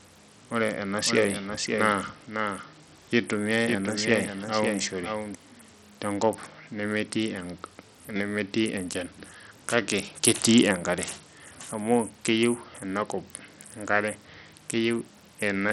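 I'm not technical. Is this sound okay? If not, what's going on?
No. The whole clip has a dull, gritty sound with treble that flickers and drops out, which points to heavy Bluetooth SBC compression, likely from a low-quality wireless link. Unlike a simple muffled recording, it adds a rough, grainy noise on top of the speech.

From 1.05 to 5.35 s there is also a doubled audio track: a second, somewhat quieter copy of the speech plays about half a second behind. Unlike a room echo, it doesn't fade or sound roomy, and it starts and stops abruptly.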